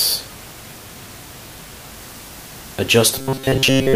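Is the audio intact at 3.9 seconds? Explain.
No. From 3.14 s to the end at 3.96 s there is robotic sound from repeated short buffers. A rigid, metallic buzz at 134 Hz follows the original only roughly, likely because a segment of about 7.5 ms is replayed over and over while most of the real audio is skipped.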